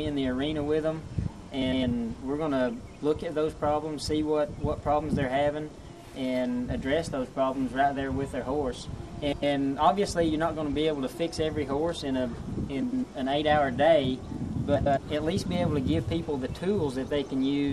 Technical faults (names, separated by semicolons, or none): frames out of order